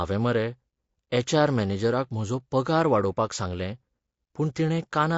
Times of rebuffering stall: none

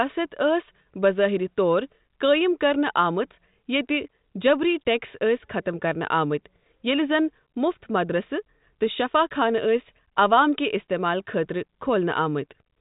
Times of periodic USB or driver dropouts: none

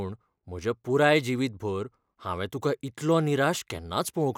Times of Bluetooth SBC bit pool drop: none

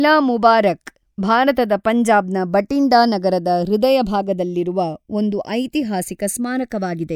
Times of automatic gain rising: none

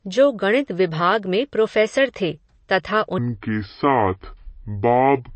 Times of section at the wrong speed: 3.18-5.35

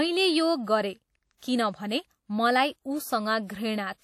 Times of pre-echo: 1.37-1.42

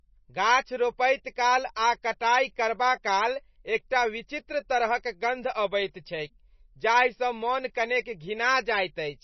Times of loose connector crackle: none

